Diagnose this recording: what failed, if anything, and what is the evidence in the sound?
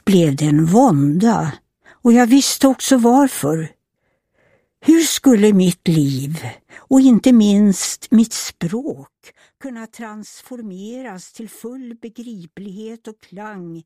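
Zipper noise appears from 8.17 to 9.43 s while the level falls by roughly 20 dB. A fast ticking rides on the sound through that fall. The gain moves in 2 dB steps, about ten per second, with no smoothing between them. Each jump lands abruptly on the waveform and leaves a small click. The fault sits where the gain is applied, either once per buffer or in coarse increments.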